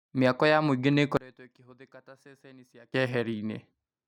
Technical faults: one channel inverted

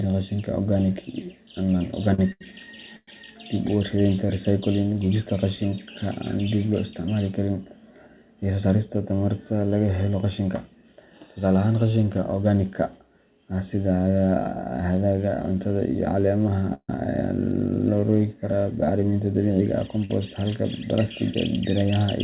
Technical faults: short stall from a late packet; call audio freeze; jitter buffer speed-up

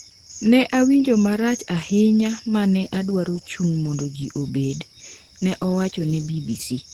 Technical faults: Opus compression

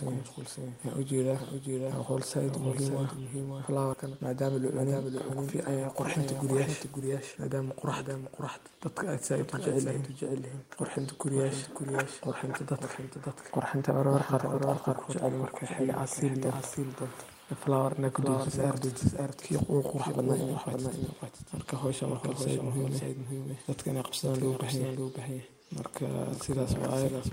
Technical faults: doubled audio track; skip ahead; jitter buffer speed-up

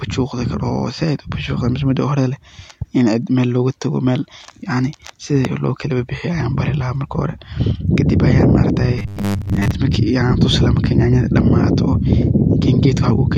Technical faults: robotic sound from repeated short buffers

